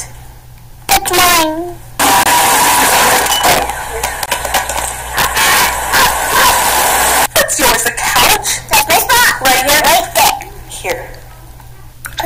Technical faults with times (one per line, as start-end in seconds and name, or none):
0.00-12.26 integer overflow
2.23-2.26 gap between stream segments
4.26-4.28 gap between stream segments
8.28 gap between stream segments